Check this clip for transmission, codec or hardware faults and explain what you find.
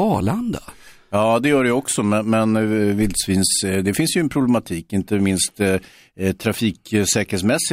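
No transmission, codec or hardware faults can be heard anywhere in this speech recording, and the signal stays continuous and stable throughout.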